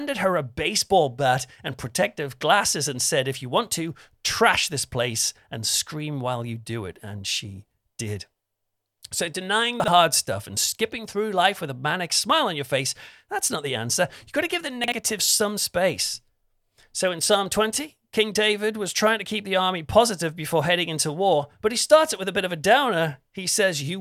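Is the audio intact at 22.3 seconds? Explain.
Yes, the speech at 22.3 seconds is intact, with no dropout, click, distortion or other fault to be heard at that moment.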